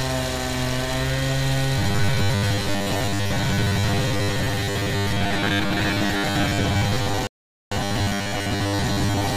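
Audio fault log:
1.79–9.37 s, robotic sound from repeated short buffers. The sound becomes a rigid metallic buzz at 100 Hz. This is likely from repeating 10 ms chunks over most of the audio.
7.27–7.72 s, rebuffering stall. The sound cuts to silence, then resumes exactly where it stopped. Playback waited for more data, adding 0.45 s.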